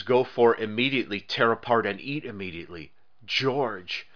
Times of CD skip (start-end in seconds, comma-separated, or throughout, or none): none